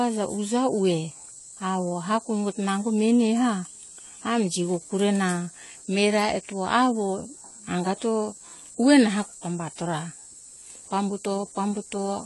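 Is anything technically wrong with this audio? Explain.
Yes. Throughout the speech there is plainly audible AAC compression. Its likely cause is AAC-LC coding at a low rate, consistent with about 32 kbps. The encoder removes everything above 11.5 kHz and coarsely quantises what remains, leaving sibilants dull, smeared and fizzy. A spectrogram shows a hard ceiling at 11.5 kHz.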